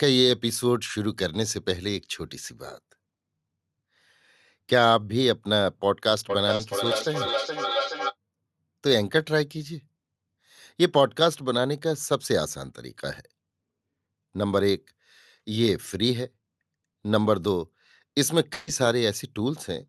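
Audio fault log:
6.30–8.16 s, feedback echo between two devices: the sound comes back roughly every 0.4 s, thinner and ringing, peaking about 4 dB below the speech. A second device in the room replays the call into a microphone whose echo canceller only removes its own playback.
6.55–6.61 s, short concealed packet loss: 40 ms of audio never arrived in time, so the decoder extended the preceding sound to bridge the gap and then blended back. Within the echo, this is heard as a brief smear or wobble.
18.53–18.69 s, burst of packet loss: 140 ms went missing in a run. The receiver stretched the last sound into a held, fading buzz or hiss with no silence, then resumed further on, skipping the audio that should have filled that stretch.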